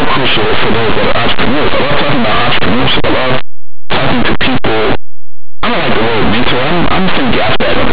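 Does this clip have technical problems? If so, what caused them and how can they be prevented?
Yes. Linear audio read as companded runs through the whole clip. Plain linear 8-bit speech samples were decoded as mu-law codes. Values just on one side of zero expand into the largest outputs. The result is very loud, harsh distortion. Prevent it by labelling the encoding and decoding with the matching format.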